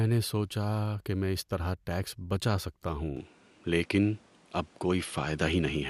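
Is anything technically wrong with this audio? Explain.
Yes. At 3.17 s the speech turns abruptly duller. Nothing remains above 11.4 kHz, and a faint new background noise appears. The input likely switched to a poorer device.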